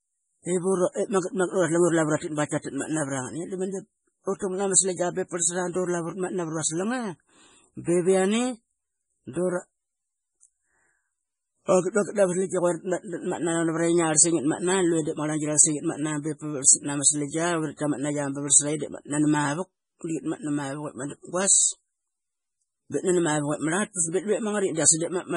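Throughout the speech, nothing is present above 10.5 kHz, and the remaining sound is watery and swirly, with smeared consonant attacks. The likely cause is heavy MP3 compression at a very low bitrate, consistent with about 24 kbps, where starved frames drop weak frequency lines frame by frame.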